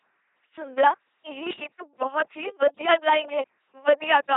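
A speech recording heard entirely through an LPC-10 vocoder, with heavy damage from start to finish. The voice becomes a buzzing, mechanical robot sound because each moment is rebuilt from a ten-pole vocal tract filter excited by either a pulse train or noise, so wrong voicing decisions leave stray buzz or hiss. The coarse result fits a 2.4 kbit/s coder. A spectrogram shows nothing above 3.8 kHz, rigidly regular harmonic combs in buzzy stretches, and flat noise bands elsewhere.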